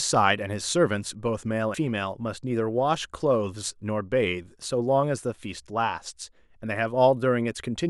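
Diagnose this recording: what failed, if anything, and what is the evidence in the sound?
Codec stage: compressed frames skipped at 1.74 s. The speech jumps ahead two 92.9 ms frames, roughly 200 ms.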